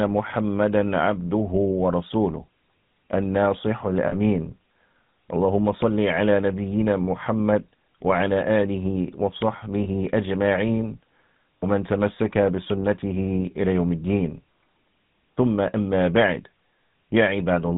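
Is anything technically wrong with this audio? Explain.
Yes, the speech carries two kinds of technical fault.

GSM full-rate codec, throughout: the whole clip has the plainly audible character of the first GSM phone codec, which fits its 13 kbps full-rate mode. The codec rebuilds the voice from a vocal-tract model excited by a sparse, regularly spaced pulse train, so fine detail is lost and nothing above 4 kHz survives. The result is a muffled, band-limited sound with a buzzy, gravelly roughness laid over the voice.

Lost GSM frames, at 4.08 to 4.14 s, 9.84 to 9.87 s and 11.59 to 11.66 s: at each point a short stretch of the coded signal is missing. The gaps at 4.08 and 11.59 s last about 40 ms, consistent with two lost 20 ms frames, and the one at 9.84 s fits a single frame. The decoder fills each gap by repeating the last good frame's settings, so instead of silence there is a brief, rough, metallic ring where the voice smears.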